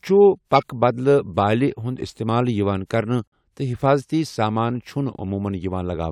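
At 0.55 to 0.63 s there is a corrupt frame decoded. One damaged compressed frame was played anyway. Its misread data causes a loud, harsh burst lasting about 80 ms.

At 3.28 to 3.32 s comes a corrupt frame muted. The decoder rejected one bad frame and silence replaced it. A sudden 46 ms gap falls just before "تہٕ حفاظٔتی سامان".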